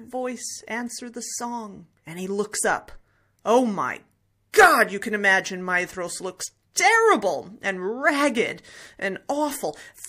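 At 4.52 to 4.54 s and 9.27 to 9.29 s, pre-echo appears. Each attack is preceded by about 22 ms of hiss, roughly 19 dB and then 12 dB up. The codec kept long blocks, around 36 ms, so attack-level noise spread backwards. Both attacks sound smeared.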